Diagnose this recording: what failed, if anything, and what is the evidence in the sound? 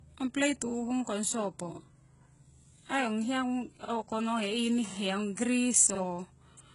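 The codec stage failed: this is low-bitrate audio saved at a high bitrate, likely a heavily compressed encode that was later rewritten as MP3. Across the whole speech clip nothing appears above 11.1 kHz, and the first encoder's artefacts persist, because re-encoding cannot restore discarded detail.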